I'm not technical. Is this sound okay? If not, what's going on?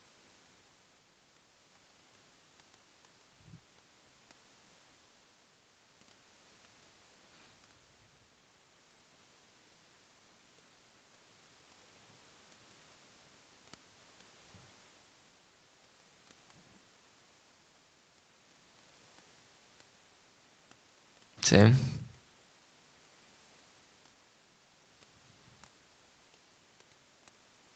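Yes, this sounds okay.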